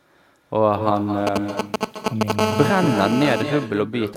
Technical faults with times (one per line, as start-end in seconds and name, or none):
0.00-4.16 echo with no canceller
1.27-2.32 GSM signalling bursts
2.39-3.42 GSM phone buzz